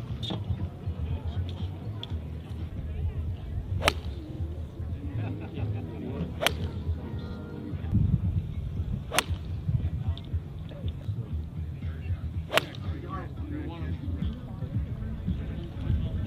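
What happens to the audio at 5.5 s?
Nothing goes wrong at 5.5 s; the audio plays through that moment intact, with no dropout, click or distortion.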